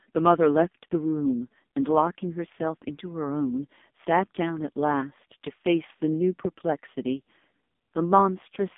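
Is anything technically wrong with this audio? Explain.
Yes. Throughout, the speech has passed through the AMR narrowband mobile codec at a very low bitrate, likely its 5.15 kbps mode. It rebuilds speech from a vocal-tract model at 8 kHz sampling, so nothing above 3.7 kHz survives, the band sits near 200 Hz to 3.6 kHz, and heavy damage sounds buzzy and synthetic.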